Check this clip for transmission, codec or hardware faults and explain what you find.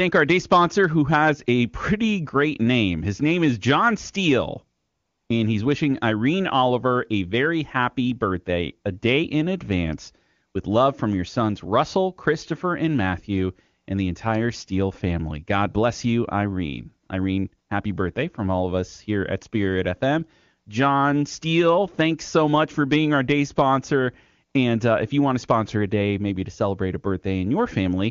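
There's one fault here, AMR comfort noise, and it shows up twice, with the wideband AMR-WB speech itself sounding clean, as you'd expect at a high rate. From 4.77 to 5.29 s, and again briefly at 17.67 to 17.69 s, the phone decided nobody was talking and stopped sending speech frames. The receiver then filled the gap with synthetic noise, so the real background gives way to a smooth, steady hiss that switches in and out.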